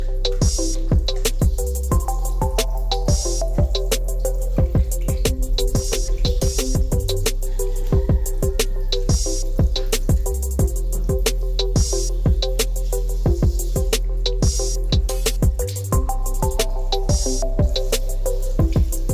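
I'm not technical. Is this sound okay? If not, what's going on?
Yes, this sound is okay, and nothing is going on with it that needs fixing.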